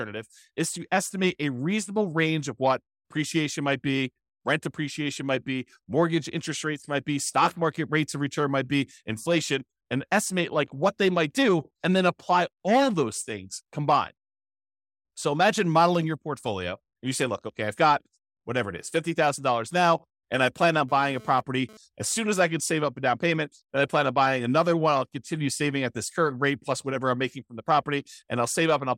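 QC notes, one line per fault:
20.89–21.77 s, GSM phone buzz: a hard, raspy buzz at about 217 Hz, rich in harmonics, sits about 24 dB below the speech for just under a second and bears no relation to it. A nearby 2G handset transmitting in pulses roughly 217 times per second is inducing RF into the audio path, where it is rectified into an audible repeating tone. The short, isolated burst fits the phone moving data rather than holding a call.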